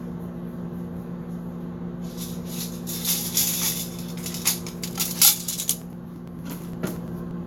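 Sounds, and from 5.59 to 7.31 s there's a steady ticking every 0.115 s, periodic USB or driver dropouts skipping roughly 10 ms each time.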